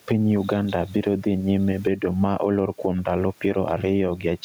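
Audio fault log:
Throughout, gain pumping. The room noise sits about 40 dB below the speech. The swing is around 10 dB. Loud and quiet passages end up close in level, so the speech sounds squashed. The likely cause is input gain set far too high, with a fast limiter or compressor pulling it down on every loud sound.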